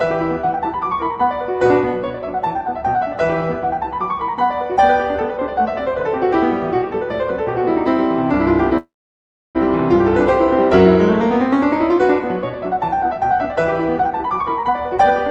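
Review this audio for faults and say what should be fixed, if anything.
From 8.77 to 9.57 s there is a call audio freeze, likely from packets held up in transit so the jitter buffer ran empty. The receiver extends the last sound briefly, then about 0.67 s of silence follows before the audio resumes where it stopped. That puts a 0.77 s gap into the audio and increases the delay by the same amount, with nothing lost. A larger or adaptive jitter buffer on a more stable network path would prevent this.

From 13.99 to 15.29 s there is a jitter buffer speed-up. The buffer held more audio than its target, so the receiver trimmed short pitch-period pieces again and again to cut the delay. Around 0.2 s of audio is removed, and this stretch plays at 118% speed with the pitch unchanged, so it sounds clearly hurried. Spreading the catch-up over a longer span would keep the speed change below the point where it is audible.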